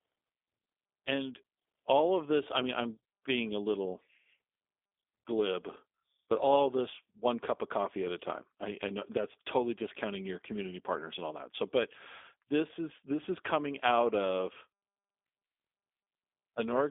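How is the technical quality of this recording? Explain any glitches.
The recording has one continuous fault: plainly audible low-bitrate speech coding across the whole clip.

G.729 codec, throughout: nothing survives above about 3.6 kHz, and the voice sounds rough and synthetic. The codec rebuilds speech from a vocal-tract filter plus sparse pulses, which fits 8 kbit/s. That roughness separates it from a clean 300 Hz to 3.5 kHz telephone band-limit.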